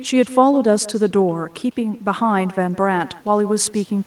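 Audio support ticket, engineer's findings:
Echo with no canceller, throughout the clip. Speech shadowed by a quieter copy, about 19 dB down, arriving roughly 150 ms behind. Copy sounds thinner than the direct signal. Probable component: far-end loudspeaker-to-microphone path with no echo cancellation. Mechanism: far end plays the call aloud, its mic recaptures it, and the network round trip returns it to the talker.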